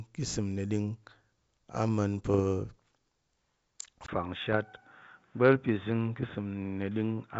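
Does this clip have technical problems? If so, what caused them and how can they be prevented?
Yes. Bit errors on an ADPCM link cause pops and rough bursts at 2.30 to 2.41 s, 4.53 to 4.58 s and 6.22 to 6.26 s. Flipped bits disturb the decoder's step size and predictor. Each error therefore rings on briefly, with short level jumps. The error rate is low, a few tenths of a percent at most. Better error protection on the radio or transmission link, or a cleaner channel, would prevent this.

From 4.06 s to the end, the sound turns dull and boxy. A 20 ms silence marks the change. Nothing reaches above 3.8 kHz after it. A new noise floor sits about 40 dB below the signal. The level stays about the same. The likely cause is the input switching to a poorer device, such as a headset's call profile. Locking the input to one device for the whole recording would prevent it.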